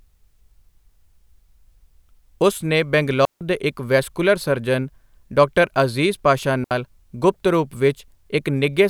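At 3.25 s, right after "ਉਸ ਨੇ", the speech cuts to a clean hole of near silence for about 157 ms before resuming at "ਦੇ ਇੱਕ ਵੈਸਕੁਲਰ ਸਰਜਨ". At 6.64 s, after "ਸਰਜਨ ਡਾ ਅਜ਼ੀਜ਼ ਪਾਸ਼ਾ", a shorter 68 ms gap follows before "ਗੁਪਤ ਰੂਪ". Both are digital wireless dropouts: the receiver lost too much data and muted with a very fast fade. Unlike an analogue radio dropout, neither gap has a hiss or noise burst at its edges.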